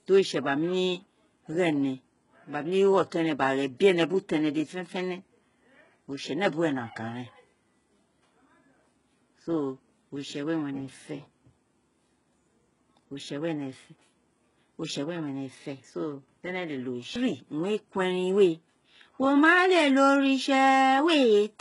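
From start to finish the speech has a gritty, metallic treble: s sounds come out lispy, and nothing reaches above about 11.1 kHz. The damage is heavy, which is likely from HE-AAC compression at a very low bitrate, consistent with something near 12 kbps. The codec keeps only the lower spectrum and fakes the upper band by copying lower bands upward, so the rebuilt harmonics fail to align with the real ones.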